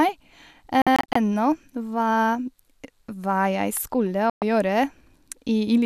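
Speech, broken twice by a digital broadcast dropout. From 0.82 to 1.16 s the sound falls into several short silent holes totalling 144 ms, none longer than 48 ms, which fits the receiver discarding failed frames of about 24 ms each. At 4.30 to 4.42 s a 120 ms loss follows. Unlike packet-loss concealment, nothing is smeared or filled in: the audio mutes and resumes later, and the missing sound is simply gone.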